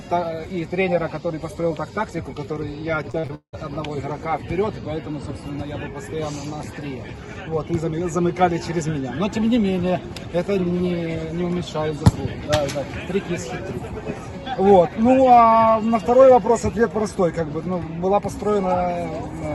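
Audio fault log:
3.11–3.55 s, repeated packet loss (robotic sound): four dropouts in under half a second, the longest about 179 ms. Each hole is bridged by stretching the preceding sound, and about 58% of the span is patched this way, giving a choppy texture with pieces missing.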